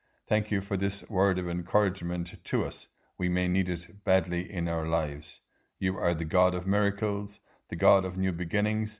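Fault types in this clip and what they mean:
No faults detected in this speech recording.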